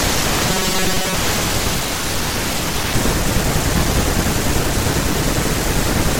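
From 0.50 to 1.16 s, audio likely arrived too seldom, so the software looped a buffer of about 5 ms to fill the gaps, repeating roughly half the time. This robotic sound from repeated short buffers repeats at a fixed 188 Hz, turning speech into a rigid metallic buzz.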